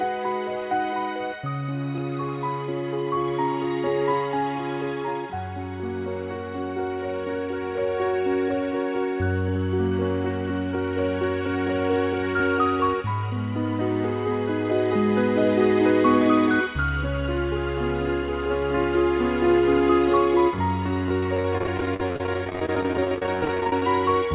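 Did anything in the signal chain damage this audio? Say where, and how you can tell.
Yes, at the network stage: repeated packet loss (robotic sound) from 21.04 to 23.83 s. Roughly 70 gaps, none over 30 ms, are filled by repeating the preceding sound, leaving about a third of that stretch choppy. On a spectrogram, this shows as striped, smeared frames beneath the 4 kHz band limit. On a waveform, it shows as repeated cycles.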